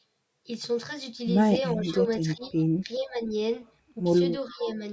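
Speech, with the level repeatedly pulled down while the far side talks, most likely speech suppressed in double talk by the call's echo canceller: dips from 1.73 to 2.54 s, 2.83 to 3.34 s and 4.49 to 4.81 s, up to roughly 15 dB deep, show as the waveform envelope pinching in and the spectrogram thinning or blanking in patches. An echo leak, likely from a loudspeaker's pickup passing through the canceller, returns a faint copy delayed by 421 ms at 2.45 to 2.5 s and 4.51 to 4.73 s, about 20 to 30 dB below the speech. It appears as a weak repeat of earlier harmonic bands, above a spectrum that ends at 8 kHz.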